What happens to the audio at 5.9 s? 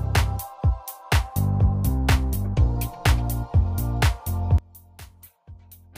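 At 5.9 s the sound has collapsed to a faint residue, about 24 dB quieter. This runs from 4.58 s to the end. The likely cause is one channel inverted. Reversed polarity makes the shared centre content cancel when the channels are summed to mono.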